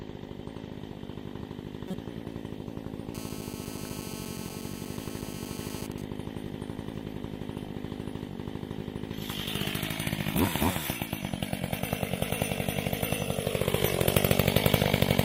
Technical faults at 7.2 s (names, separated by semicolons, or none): GSM signalling bursts